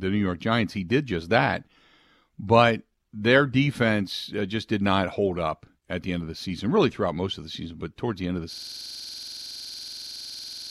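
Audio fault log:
8.53 to 10.70 s, system hang loop: the machine froze and one 46 ms buffer kept replaying, leaving a rough 21.5 Hz buzz until the end.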